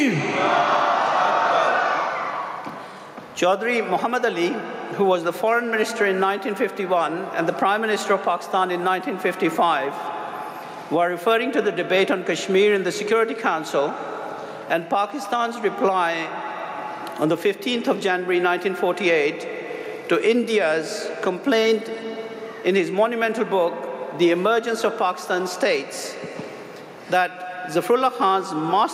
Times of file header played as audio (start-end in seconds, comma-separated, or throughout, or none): none